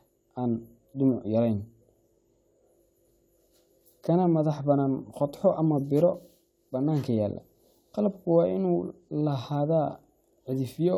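A speech recording, and nothing is technically wrong with it.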